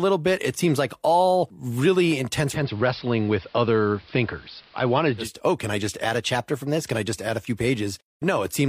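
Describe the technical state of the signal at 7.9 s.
At 7.9 s the speech signal is intact, with no audible fault at that moment.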